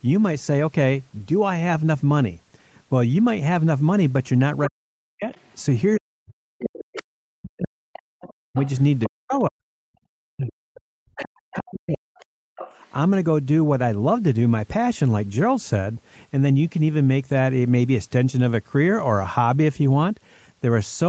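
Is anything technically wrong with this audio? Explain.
Yes, two kinds of fault come and go through the middle of the clip.

Speech suppressed in double talk, 4.66 to 5.33 s, 5.97 to 9.63 s and 10.18 to 12.58 s: an echo canceller that likely couldn't separate the talker from loudspeaker echo attenuated everything, so the speech dips by as much as about 40 dB and breaks up.

Other side's voice leaking through, 5.34 to 5.54 s, 6.81 to 7.03 s, 7.65 to 9.10 s and 11.60 to 12.91 s: residual far-end audio, likely left uncancelled in the microphone signal, surfaces as a second voice. It sits about 35 dB below the speech at first, then rises to about 15 to 20 dB below.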